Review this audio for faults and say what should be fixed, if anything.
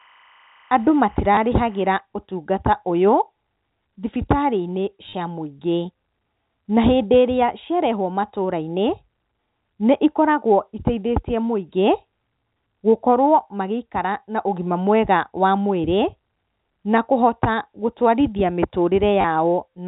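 Timecode bleed runs from 0.0 to 2.0 s. Leaking 25-frame code chirps near 1 kHz and 2 kHz about 35 dB under the speech, showing as alternating narrow bands on a spectrogram. Prevent it by separating and shielding timecode lines from audio cabling.

Packet loss with last packet repeated occurs at 1.35 to 1.37 s (20 ms), 5.09 to 5.13 s (40 ms) and 19.21 to 19.24 s (30 ms). Replayed 10 ms segments buzz at 100 Hz. On a waveform these appear as identical copied blocks with abrupt steps. Prevent it with a larger jitter buffer and proper loss concealment, such as interpolation with crossfades instead of straight repetition.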